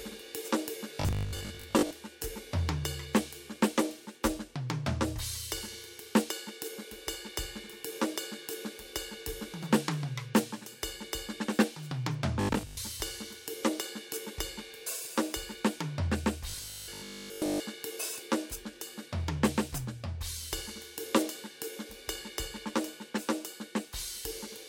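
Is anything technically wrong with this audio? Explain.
Yes. There are three stretches of robotic sound from repeated short buffers, at 0.95 to 1.93 s, 12.41 to 12.77 s and 16.50 to 17.60 s. The music collapses into a stiff, metallic 50 Hz buzz that only loosely follows it. This is likely a playback path starving for data and looping the last 20 ms or so, replacing roughly half the audio in the first stretch and most of it in the later two.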